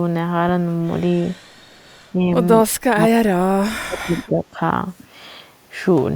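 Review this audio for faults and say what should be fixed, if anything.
From 1.53 to 1.85 s the room background drops by about 11 dB. This is background gated by the echo canceller, clamping the microphone during loudspeaker playback.

The speech dips by about 10 dB from 2.13 to 2.28 s. It then falls away deeply, by roughly 35 dB, from 2.89 to 4.59 s. The likely cause is speech suppressed in double talk, with the canceller ducking the near talker alongside the echo.

Fixing this needs a canceller with better double-talk detection and gentler residual suppression, so it attenuates only the echo and not the room or the talker.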